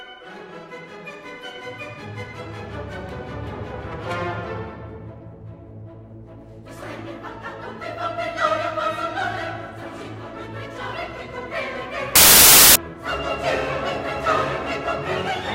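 Wrong sample width from 12.16 to 12.76 s: audio stored as 32-bit integers is read back as 16-bit integers, so every original sample is split into two. One half holds the signal's top bits and the other holds near-random low-order bits, so loud hiss dominates with the real sound faintly underneath. Because each sample becomes two, that stretch plays at half speed, an octave lower.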